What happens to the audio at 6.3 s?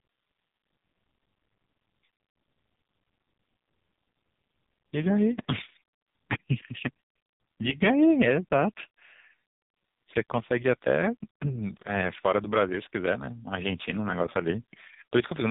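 At 6.3 s, as across the whole clip, the speech passes through the AMR narrowband mobile codec. Nothing above 3.8 kHz survives, and the heavy buzzy, synthetic texture fits a very low mode near 5 kbps. Unlike a plain low-pass filter, the voice is rebuilt from a vocal-tract model with pulse excitation, not merely dulled.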